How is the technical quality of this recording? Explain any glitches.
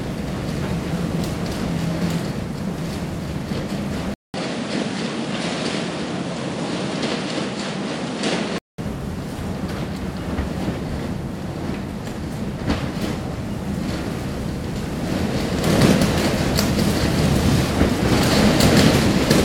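The technical quality is compromised by one fault: the input appears to have switched to a poorer device between 4.14 and 8.78 s. A gap of about 200 ms marks the change, then the sound turns duller, with nothing above 10.5 kHz, a small level shift and a faint new noise floor well below the signal. This is likely a change to a narrower-band microphone or headset path with its own tone and noise. Full bandwidth returns after 8.78 s.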